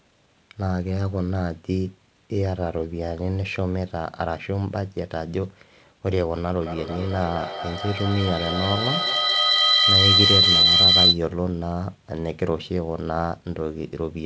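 From 6.61 s to 11.23 s a feedback howl builds as sound loops from loudspeaker back into a nearby microphone. It narrows to a tone around 4 kHz that pulses about every fifth of a second and peaks about 8 dB above the speech. Unlike echo, its repeats grow rather than fade.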